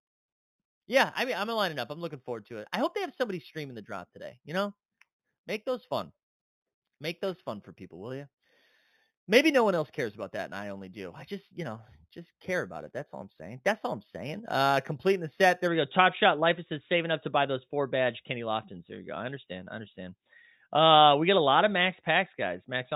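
Imaging from linear upsampling runs from 0.0 to 15.68 s. The rate was raised by straight-line interpolation, which fits a rise from 8 kHz to 48 kHz. The weak filtering leaves mirrored spectral copies from 4 to 8 kHz, roughly 20 dB down, heard as a metallic shimmer on sibilants.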